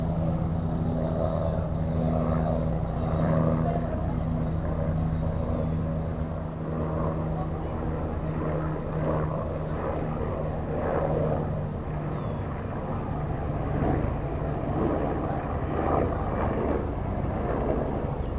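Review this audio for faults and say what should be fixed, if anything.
Nothing here needs fixing: the sound comes through a call path using G.711 A-law at 64 kbps, which fits the bandwidth stopping at 4 kHz.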